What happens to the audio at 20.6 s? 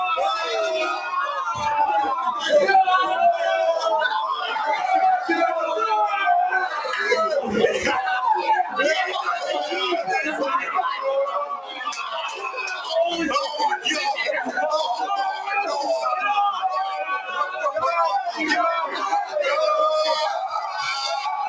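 From 20.44 to 20.78 s the sound sinks by up to about 7 dB. This is sound cut by the noise suppressor: a speech-tuned suppressor treated the steady, fading material as noise and turned it down harder than its surroundings.

That dip sits within a broader level loss, where held sound and tails swing in level by something like 10 dB while attacks pass. This is a noise suppressor applied to music or sounds. It keeps mistaking sustained content and ambience for background noise.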